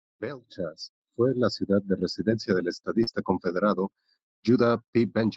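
At about 3.03 to 3.09 s, just after "ciudad de residencia del", the speech briefly smears and wobbles, as if the sound were stretched for an instant before blending back. This is short concealed packet loss: about 40 ms of the call arrived too late or not at all, and the receiver covered roughly 34 ms of that gap by extending the preceding sound, continuing its pitch or shaped noise, then crossfading into the audio that followed.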